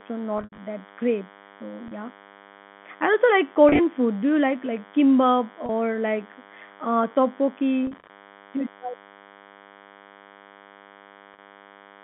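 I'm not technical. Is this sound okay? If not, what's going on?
No. A thin, steady buzz runs under the whole recording. That is DECT cordless phone buzz: a nearby cordless phone or its base sends radio pulses 100 times a second, and the audio circuit picks them up.

The speech also briefly catches or smears at six points: 0.38–0.58 s (just before "that great"), 1.88–1.91 s, 3.69–3.79 s (right after "I also like"), 5.66–5.69 s (between "you like like kimbap" and "like uh"), 7.87–8.09 s, and 11.34–11.38 s. This is packet loss with pitch repetition. Bits of the sound went missing in transit, and the receiver patched each gap by repeating the last fragment of voice.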